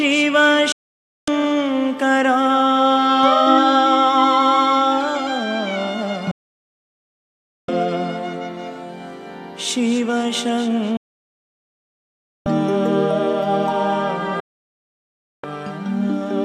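Digital broadcast dropouts at 0.72–1.28, 6.31–7.69, 10.97–12.46 and 14.40–15.44 s: the receiver muted on bad frames, cutting sound within 3 ms, losing 0.55–1.49 s each.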